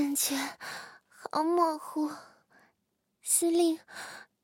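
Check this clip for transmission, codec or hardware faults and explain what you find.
No transmission, codec or hardware faults can be heard anywhere in the audio.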